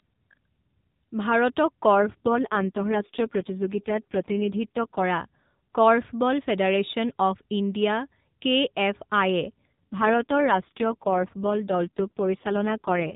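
A speech clip carried over a narrowband mobile link, with nothing above 4 kHz. It suffers two AMR rate drops, from 1.94 to 5.04 s and from 9.72 s to the end. The band stays the same and nothing cuts out. The voice turns rough, buzzy and synthetic. This fits the codec falling from about 12.2 to 4.75 kbps on a weak radio link.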